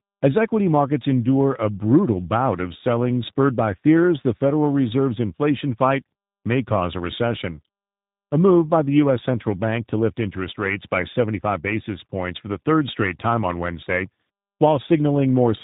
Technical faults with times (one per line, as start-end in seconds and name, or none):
0.00-15.63 tandem speech coding